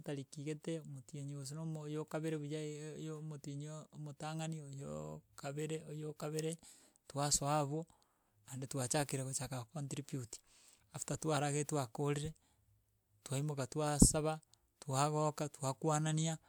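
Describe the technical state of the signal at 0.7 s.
At 0.7 s the speech signal is intact, with no technical fault present at that moment.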